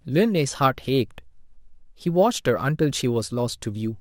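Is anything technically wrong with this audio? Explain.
Yes, the whole speech clip shows crude rate conversion. Every few samples appear to be simply repeated rather than filtered, a pattern that fits a 32 kHz to 48 kHz change done by nearest-sample picking. That uneven stepping leaves an error about 25 dB below the speech, heard as a gritty, inharmonic fizz riding on loud and sibilant moments. Unlike clipping, it does not wait for peaks and its tones bear no harmonic relation to the voice.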